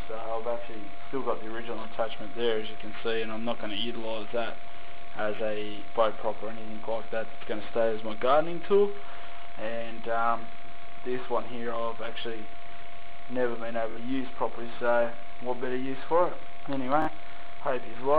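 Bluetooth stutter occurs three times: at 5.37 to 5.40 s, 13.91 to 13.97 s and 17.02 to 17.08 s. Each time, packets arrived late or not at all, so the receiver replayed its last buffered slice until fresh data came in. The first gap is about 23 ms, which fits a single lost frame and gives a brief double-hit. The later two are about 46 ms each, which points to two frames and gives a short buzzing repeat. Afterwards the sound resumes further along, as though it had kept running.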